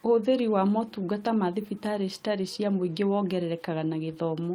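A speech clip with one lost packet rebuilt from error correction at 2.43 to 2.45 s, between "motungata ma thibitarĩ citarĩ" and "cia mũingĩ". About 20 ms sounds briefly rougher and noisier, yet there is no gap or smeared concealment: the next packet carried a low-bitrate copy.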